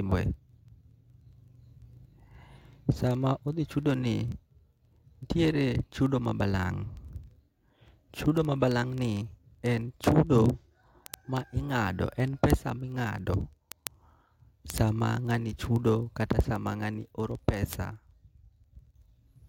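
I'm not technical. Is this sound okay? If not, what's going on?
No. Behind the speech there's a steady stream of sharp ticks of uneven strength, roughly 25 every second, running from 0.12 s to the very end at 19.47 s. These are word clock ticks. The recording device wasn't timed by the same clock as the equipment sending it the sound, and the two clocks ran at different speeds. Each time they slipped apart, a single sample was dropped or doubled, and each slip makes a click.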